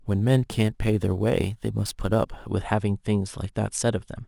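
From the start to 2.51 s the speech carries crude rate conversion. Samples were repeated without filtering, in a pattern consistent with a 44.1 to 48 kHz change, leaving a gritty inharmonic fizz roughly 30 dB down. A spectrogram shows faint spurious lines tracking louder, brighter syllables.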